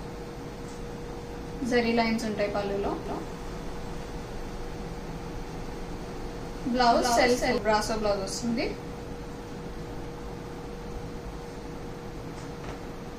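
From 3.06 s to 7.58 s the audio is heard twice: a second, full-band copy runs around 300 ms behind the first, roughly 5 dB quieter, with no decay or room colour, switching on and off abruptly. This doubled audio track is likely from a second, slower capture path mixing in.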